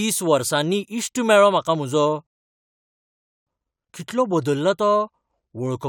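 At 2.27 s the speech halts in a rebuffering stall: playback ran dry of downloaded audio and silence holds until 3.47 s, adding about 1.2 s. Unlike a dropout, nothing is skipped; the speech resumes exactly where it stopped.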